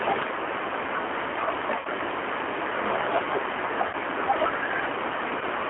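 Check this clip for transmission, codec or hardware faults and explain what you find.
The speech has two faults: a G.729 codec coloring the whole clip, and three short dropouts where lost VoIP packets were concealed by that codec.

G.729 codec: Throughout, the speech has passed through a low-rate predictive voice codec, consistent with 8 kbit/s G.729A on a telephone line band of roughly 250 Hz to 3.4 kHz. The decoder rebuilds each frame from a vocal-tract filter, a pitch predictor and a handful of pulses rather than the original waveform. The result is a thin, band-limited sound with a plainly audible rough, synthetic edge.

VoIP packet loss concealed by the speech codec: At 1.79 to 1.87 s, 3.87 to 3.96 s and 5.39 to 5.43 s, packets went missing and the decoder filled the gaps by extending its last pitch and filter settings at falling gain. The first two gaps sound like about 60 ms of lost audio, which points to around three packets each. 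The third sounds like about 20 ms, roughly one packet. Each gap comes out as a stretched tone or coloured noise that fades, and the speech stays weak or distorted for a few tens of milliseconds after it.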